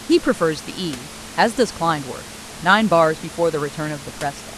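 No technical faults are audible.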